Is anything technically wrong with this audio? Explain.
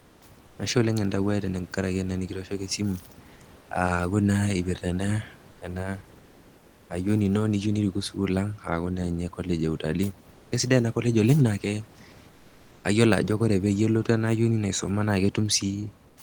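Yes. There is comfort noise in place of the background in seven pauses: 0.00 to 0.21 s, 0.47 to 0.57 s, 3.61 to 3.69 s, 5.51 to 5.61 s, 6.17 to 6.89 s, 12.31 to 12.83 s and 16.07 to 16.17 s. The sender's voice detector, likely Opus DTX, stops transmitting when speech ends, and the receiver fills the gaps with generated noise. The room noise, about 28 dB below the speech, gives way to flat, featureless hiss, usually about 2 to 3 dB quieter. The longest patches are 0.72 s and 0.52 s.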